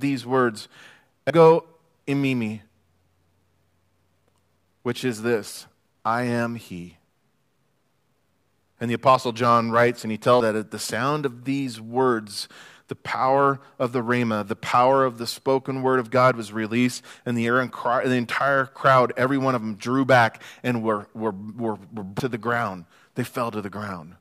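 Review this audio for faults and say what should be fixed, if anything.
Three hard joins interrupt the speech at 1.3 s, 10.40 s (between "writes and he" and "at the sound of") and 22.20 s (after "were were were were", before "to the"). Each is a jump forward in the sound, losing roughly a tenth, two tenths and three tenths of a second. This is likely a dropped buffer (overrun): samples were overwritten before being read, so the surrounding audio is spliced directly. Unlike an underrun, no silent gap appears, only a skip. To prevent it, raise the recording thread's priority or enlarge the capture buffer so reads keep pace with the hardware.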